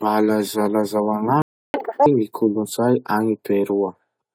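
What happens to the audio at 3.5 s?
Nothing goes wrong at 3.5 s; the speech runs through that moment intact, with no dropout, click or other fault.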